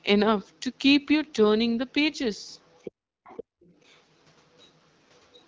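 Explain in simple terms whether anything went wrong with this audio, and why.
A faint second voice can be heard behind the speech at 2.53 to 2.91 s, 3.24 to 3.44 s, 3.63 to 4.01 s, 4.59 to 4.7 s and 5.18 to 5.44 s. This is the other side's voice leaking through, likely because the talker's loudspeaker played the far end into the microphone and the echo canceller didn't remove all of it.

The room sound briefly drops out from 2.91 to 3.24 s and again from 3.44 to 3.63 s, then comes back. This is background gated by the echo canceller: while the loudspeaker played, it turned the microphone down hard for a fraction of a second.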